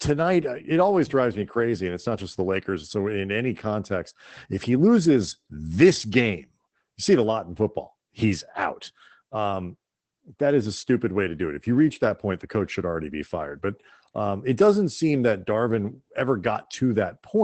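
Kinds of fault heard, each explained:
Opus voice compression: The speech passes through Opus's SILK linear-prediction coder, which rebuilds the voice from a coarse excitation and leaves it plainly muffled, hoarse and slightly robotic, which fits a low bitrate near 12 kbps. On a spectrogram the energy stops flat at about 8.5 kHz, the band held to wideband, and harmonics look smeared and grainy. The coding seems to work in blocks consistent with 20 ms frames.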